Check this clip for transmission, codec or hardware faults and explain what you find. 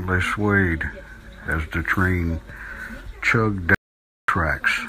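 One fault: an audio dropout to silence from 3.75 to 4.28 s, losing 0.54 s of speech as plain silence, likely from input loss while recording continued.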